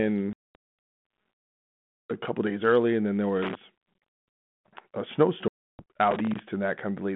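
Packet loss on an ADPCM call, 0.33 to 0.55 s: about 220 ms of speech drops to hard-edged silence as some twenty packets vanish. The decoder's predictor and step size then mismatch the sender's, so speech resumes slightly distorted.

Loose connector crackle, 3.42 to 3.55 s, just after "early and then there": an irregular scratchy burst as a worn contact makes and breaks, chopping the signal.

Packet loss on an ADPCM call again, 5.48 to 5.82 s: a 310 ms hole, roughly thirty packets, with the same distorted recovery afterwards.

Loose connector crackle, 6.11 to 6.39 s: another ragged burst of crackling from the intermittent contact. Throughout, the G.726 telephone band, 150 Hz to 3.5 kHz at 32 kbit/s, adds light coding damage.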